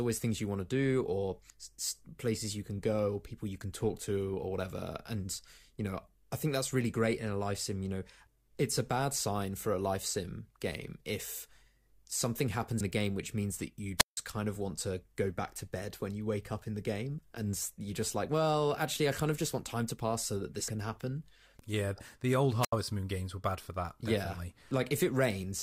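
At 1.5 s the speech jumps forward: compressed frames skipped, losing roughly 150 ms. More skips follow at 12.8 s (about 100 ms lost) and at 17.17, 20.67 and 24.7 s (about 40, 200 and 100 ms). At 13.97–14.17 s, and again at 22.61–22.73 s, a wireless microphone squelch dropout mutes the audio for about 160 ms and then about 80 ms. Hiss swells before each hole, which sets it apart from a clean digital gap.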